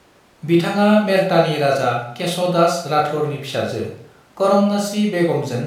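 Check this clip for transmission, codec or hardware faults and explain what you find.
No faults turned up anywhere in this recording.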